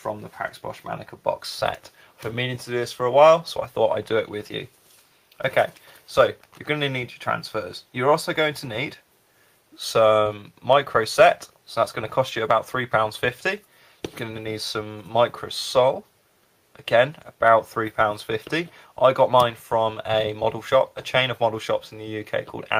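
Nothing stood out on listening to this recording.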